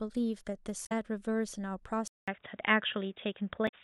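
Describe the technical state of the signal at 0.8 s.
A brief glitch cuts into the speech from 0.82 to 0.92 s. This is damaged data in a compressed stream: corrupted bytes leave the decoder unable to read those frames properly, so it misreads or drops them and loses sync until it locks onto the next valid frame header.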